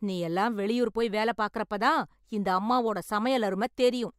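No technical faults are audible.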